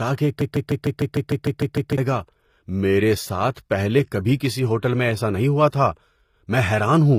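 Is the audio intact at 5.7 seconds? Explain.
No. HE-AAC compression runs throughout, likely at a low bitrate near 24 kbps. Treble above 15.5 kHz is gone, and the rebuilt upper band sounds gritty and metallic.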